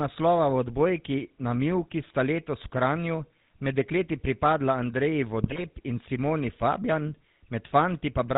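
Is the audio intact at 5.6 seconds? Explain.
No. GSM bit errors hit from 5.44 to 5.64 s. Corrupted bits reach the decoder, so the filter, pitch and gain values for several frames come out wrong. The spectrum warps and the level jumps, and the speech breaks into squawks, pops and gargling.

The GSM full-rate codec at 13 kbps also runs through this moment, as it does across the whole clip. It rebuilds speech from a vocal-tract model driven by sparse pulses and drops everything above 4 kHz, leaving a plainly audible buzzy, gravelly roughness under the glitch.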